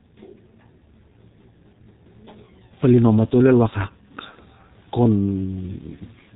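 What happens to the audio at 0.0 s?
Right from 0.0 s the speech is already coming through the G.723.1 codec, and it stays that way for the whole clip rather than starting at that point. The codec works in 30 ms frames and throws away everything above 4 kHz, and the heavy damage here fits its low rate of around 6.3 kbit/s. So the speech sounds muffled and hoarse, consonants smear into each other, and the voice model lags behind quick changes.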